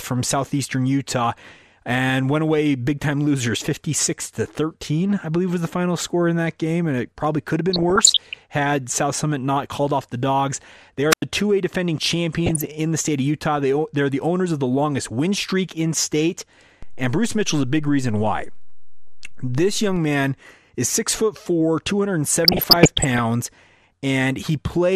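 The speech is dull from start to end, with a gurgling, granular edge. That is MP2 compression, likely the cause. MPEG Layer II divides the sound into 32 sub-bands and shares out a bit budget among them. Here the budget is tight, which fits a rate around 80 kbps. Upper bands drop out and flicker. The remaining bands are coarsely quantised. The damage is plainly audible throughout.

From 7.69 to 8.38 s, DAB burbling appears. Bit errors have slipped past the error correction into the audio data. Wrong samples put short blips of noise in single sub-bands, and wrong scale factors make sub-bands jump in level for up to a frame. The error rate this points to is under one percent. The same burble returns from 12.46 to 12.67 s, just before "the state of", and again from 22.45 to 23.19 s.

At 11.10 s, right after "off the dogs they", there is a wireless microphone squelch dropout. The FM radio link fades, and the receiver's squelch cuts the output. 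The sound drops into near silence for about 90 ms. It is back by 11.23 s.

At 16.83 s, after "win streak in state", a DC step occurs. The waveform's zero line suddenly shifts, as if an offset were switched in. It is heard as a low thump. The offset holds until 19.96 s, just before "man is six foot". The speech itself carries on unchanged.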